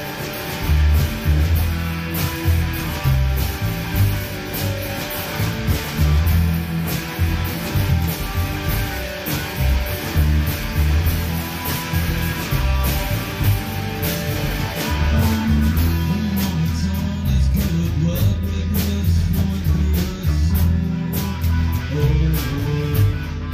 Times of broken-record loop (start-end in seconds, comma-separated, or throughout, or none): none